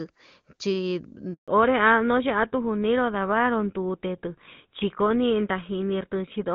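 A handover gap runs from 1.34 to 1.48 s. The call was passed between networks and no speech frames arrived for 140 ms. The sound dies away almost at once and stays silent until the new link picks up, so whatever fell inside the gap is lost.

A fallback to narrowband follows at 1.48 s and lasts to the end. After the crisp wideband start, which sounds like HD Voice at a high rate, the call dropped to an older codec, likely GSM full rate. Nothing above 4 kHz remains, so the speech turns dull, boxy and rough.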